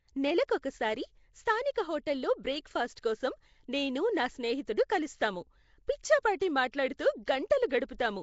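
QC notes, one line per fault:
Throughout: Nellymoser compression. The speech has a rough, hissy halo and a smeared, underwater quality, and there is no content above 7.7 kHz. The cause is likely Nellymoser Asao coding, the old Flash microphone codec, at a rate that fits 32 kbps. It quantises short blocks coarsely, so weak bands receive no bits and are filled with synthetic noise. That noise fill produces the hiss, and the coarse block coding blurs consonant detail, leaving the damage plainly audible.
2.96, 6.40, 6.72 and 7.26 s: pre-echo. A short burst of hiss runs ahead of a sharp onset each time, lasting 11, 14, 17 and 16 ms respectively. The first falls between "హోటల్లో బ్రేక్" and "కోసం నేను నా స్నేహితుడు". In each case the attack lands late in a transform block. The coder spreads quantisation noise, sized for the loud attack, across the whole block, so the noise spills into the quiet gap before it. 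The onset therefore sounds softened and smeared rather than crisp.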